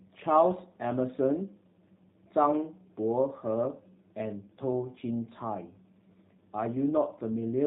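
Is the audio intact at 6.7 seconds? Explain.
No. At 6.7 seconds the speech carries G.729 codec damage, present from start to end. Each 10 ms frame is rebuilt from a vocal tract filter, a pitch predictor and a few pulses, which fits an 8 kbit/s stream. Nothing above 4 kHz survives. The result sounds plainly rough and synthetic.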